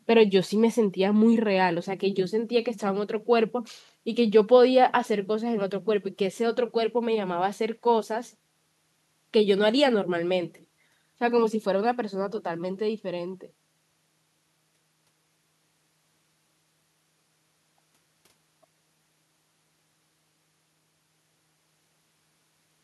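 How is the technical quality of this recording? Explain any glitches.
Listening through the speech, nothing stood out as a technical problem, so there are no glitches to explain.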